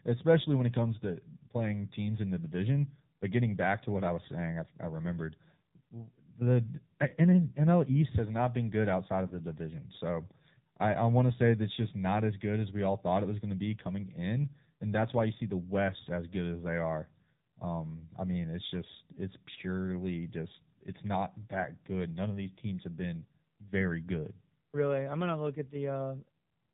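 Speech runs through the AMR narrowband mobile codec at a low bit rate, which fits about 7.4 kbps, so nothing above 4 kHz survives and the voice sounds plainly buzzy and synthetic. At 9.28 to 9.35 s, after "not been good outside", and at 15.38 to 15.42 s, after "that's why you", a single lost AMR speech frame each time forces the decoder to repeat old settings, giving a brief dip or warble.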